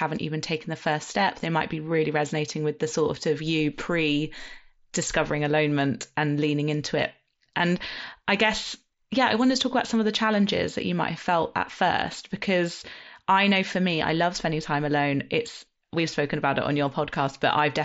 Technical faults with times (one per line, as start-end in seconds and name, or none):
none